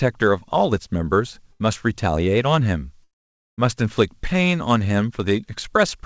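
A burst of packet loss at 1.52 to 1.62 s forced the receiver to stretch and fade the last sound for about 80 ms, so the speech briefly buzzes or hisses, then skips ahead. From 3.04 to 3.60 s, a likely long network dropout stopped audio arriving for about 0.54 s. The concealment fades quickly, leaving roughly half a second of silence before the speech returns with that stretch gone.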